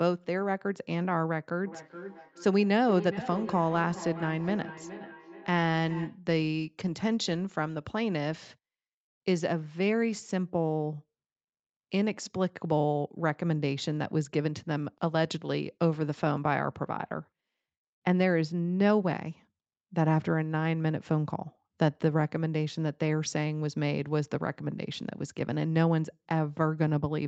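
Speech from 1.66 to 6.23 s carries feedback echo between two devices: each phrase returns roughly every 0.4 s, thinner and ringing, peaking about 13 dB below the speech. A spectrogram shows stacked, evenly spaced copies of each syllable, and the waveform shows trailing repeats.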